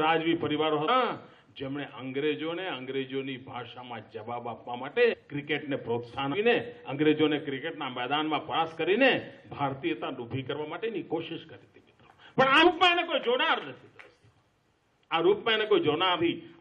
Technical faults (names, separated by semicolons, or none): compressed frames skipped